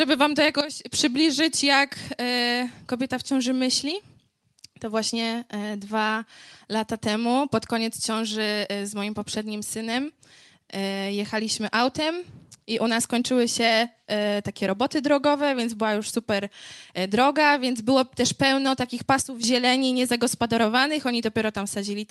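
At 0.61 s the level drops by about 12 dB in a single step, with the background noise falling along with the sound, then returns at 0.92 s. The same sudden gain jump recurs from 19.22 to 19.44 s. Unlike a fade or compressor pumping, there is no ramp at all, likely an unramped gain setting change. The call path's band limit near 12 kHz stays steady throughout.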